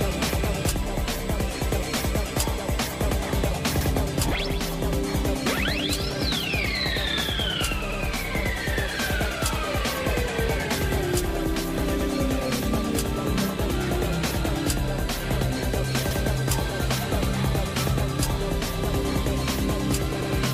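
The audio was handled in 4-second overlapping chunks, each beginning 100 ms before the previous one finished. At 3.81, 12.01, 16.11 and 20.21 s that 100 ms stretch plays twice, which comes through as a click or stutter at each of those joins.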